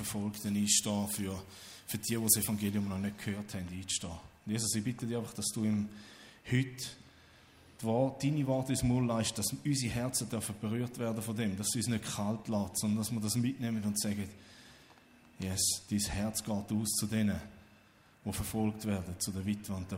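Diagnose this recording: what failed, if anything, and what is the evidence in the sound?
Pre-emphasis left on, at the playback stage. From 0.33 to 2.71 s the treble jumps up. The sound turns thin, bright and hissy, with sharp sibilant edges. The lift reaches about 8 dB at 10 kHz relative to 1 kHz. That shape fits the CD 50/15 µs curve. The treble boost was applied before storage, but the matching de-emphasis cut was skipped on playback for that stretch. So the highs come through uncorrected.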